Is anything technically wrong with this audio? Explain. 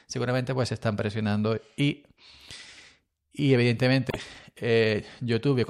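Yes. There is one fault, at 4.09 to 4.16 s in this speech clip. It is damaged data in a compressed stream. For about 70 ms, part of the coded data is wrong. The bytes may have been lost, zeroed, overwritten or mixed with other data. The decoder misreads or rejects those frames and loses sync. It then hunts for the next valid frame header. The result is a brief disruption in the speech, such as a chirp, squawk, click or short gap.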